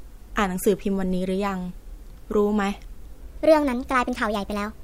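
A section at the wrong speed runs from 3.21 s to 4.84 s. The speech plays 1.29 times fast, likely from a clock mismatch, and sounds hurried and about four semitones high.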